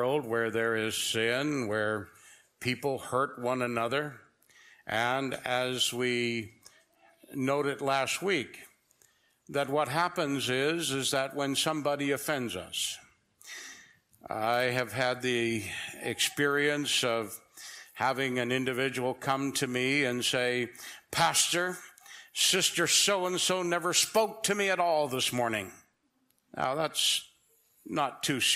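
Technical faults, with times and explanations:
Nothing stood out on listening to this recording.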